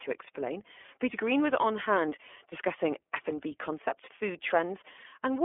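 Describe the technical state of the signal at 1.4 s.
At 1.4 s the speech is carried through the iLBC codec, a fault present for the whole clip rather than at that moment alone. The low-bitrate coding fits the 20 ms frame mode near 15 kbps, with each frame's excitation coded independently of its neighbours. The result is plainly audible: a rough, slightly synthetic texture on the speech, confined to a telephone band of roughly 300 Hz to 3.4 kHz, with nothing above 3.6 kHz.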